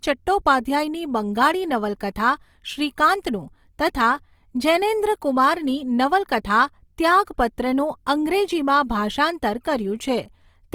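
Throughout, the speech was likely run through Opus compression in its CELT music mode, at a rate the sound suggests is about 24 kbps. Short of bits, the encoder fills band detail with folded or noise content, so the speech turns plainly rough and grainy, yet still reaches 20.3 kHz.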